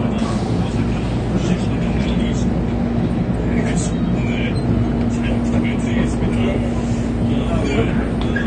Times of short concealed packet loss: none

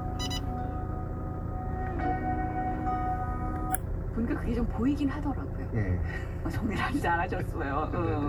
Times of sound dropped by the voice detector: none

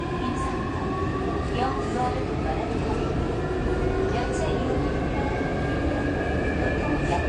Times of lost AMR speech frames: none

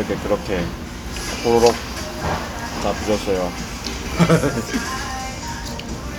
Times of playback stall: none

